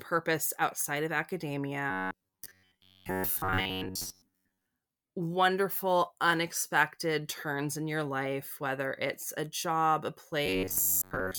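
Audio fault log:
1.91–4.66 s and 10.46–11.39 s: robotic sound from repeated short buffers, ending before "wonderful unexpected turns in" and starting after "it's a job a". The sound turns into a rigid metallic buzz at 93.8 Hz, likely from one roughly 10.7 ms block being replayed while about 70 percent of the real audio is skipped.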